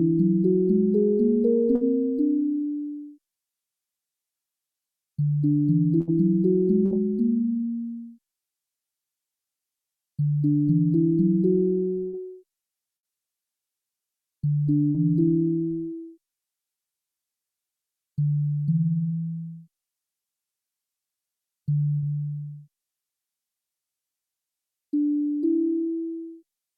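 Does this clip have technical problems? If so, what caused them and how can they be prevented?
Yes, there's a burst of packet loss at 1.75, 6.01, 6.85, 12.07, 12.97, 14.89 and 21.96 s. Each time the receiver stretches the last sound for about 55 to 65 ms while fading it, then jumps ahead, with about 60 ms of audio gone. Larger jitter buffers, forward error correction or a more stable network path would prevent it.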